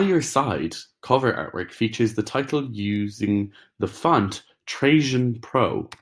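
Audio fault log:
Nothing wrong turns up anywhere in this speech clip, so there's nothing to log here.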